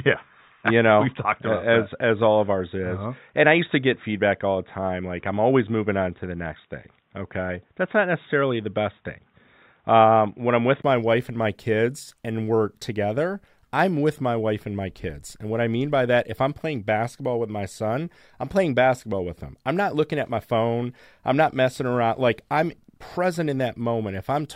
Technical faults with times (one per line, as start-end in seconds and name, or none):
0.00-10.84 input switched to a poorer device